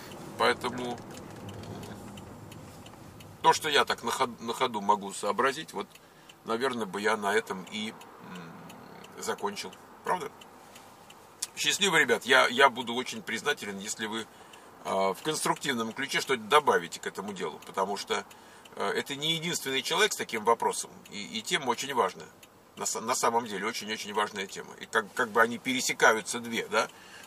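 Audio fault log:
No technical faults are audible anywhere in the signal.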